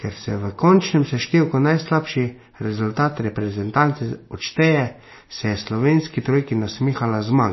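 Throughout the speech, MP3 compression at a very low bitrate is the likely cause. The encoder discards everything above 5.8 kHz and drops weak frequency lines frame by frame, so s sounds turn dull and swirly, with a plainly audible watery texture that fits roughly 24 kbps.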